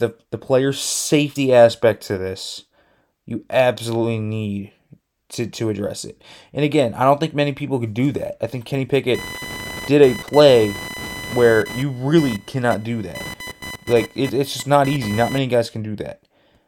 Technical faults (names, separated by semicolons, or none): computer activity noise